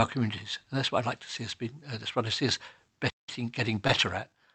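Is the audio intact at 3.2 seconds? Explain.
No. A playback stall, likely the player running short of data or its thread being blocked, silences the speech from 3.09 to 3.29 s, right after "what I see us", for about 180 ms.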